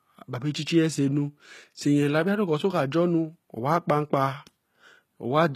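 Across the whole speech clip the treble sounds rebuilt rather than captured: s sounds come out gritty and metallic, and nothing remains above 14.9 kHz. This is likely HE-AAC compression at a low bitrate, which fits about 20 kbps. Unlike a plain low-pass cut, the upper band is still present, but it is copied upward from lower bands.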